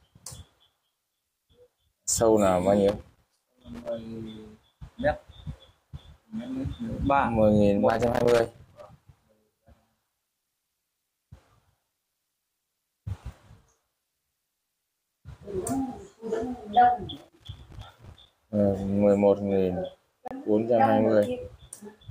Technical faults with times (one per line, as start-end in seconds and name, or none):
2.88-3.89 loose connector crackle
7.90-8.86 loose connector crackle
17.17-18.31 loose connector crackle
20.28-20.31 Bluetooth stall